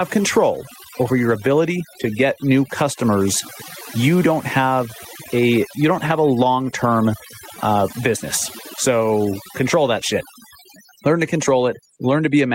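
Overdone noise removal runs throughout: a noise reducer set far too strong cuts frequency bands near its noise estimate, leaving a lowered background that breaks up into twinkling specks. Gain pumping is also present throughout, likely from input gain set too high feeding a fast limiter; the gain swings by around 10 dB under loud syllables, squashing the dynamics.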